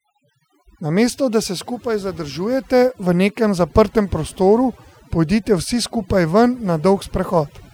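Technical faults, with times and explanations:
Throughout: overdone noise removal. A noise reduction stage set too strong cuts individual frequency bands down or off whenever they sit near its noise estimate, taking quieter parts of the speech with them. The background drops and breaks up into twinkling, warbling specks.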